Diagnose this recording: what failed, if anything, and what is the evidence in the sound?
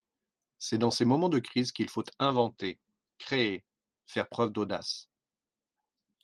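Call bitrate drop at the codec stage, 2.21–4.63 s, after "de crise qu’il faut": 32 to 12 kbps leaves speech rough and muffled, and the spectrogram empties above 8 kHz.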